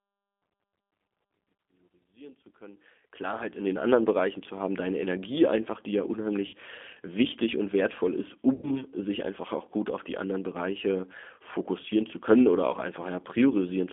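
Right from the start, the speech carries G.729 codec damage. At 8 kbit/s it's rebuilt from a filter, pitch predictor and a few pulses, so it sounds rough and synthetic, squeezed into a line band of about 250 Hz to 3.5 kHz.

Then there's VoIP packet loss concealed by the speech codec at 6.47–6.56 s (60 ms lost, which fits two 30 ms packets) and 8.54–8.83 s (90 ms lost). The decoder keeps stretching its last pitch and filter while fading the gain, so you hear the sound drawn out into a buzzy tone or coloured noise that dwindles. The speech stays weak for a bit afterwards.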